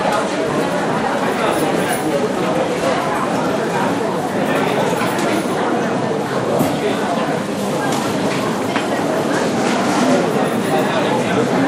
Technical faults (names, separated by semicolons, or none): train of clicks